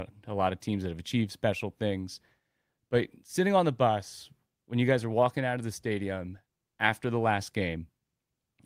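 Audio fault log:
No faults can be heard anywhere in this speech recording. There is nothing to log.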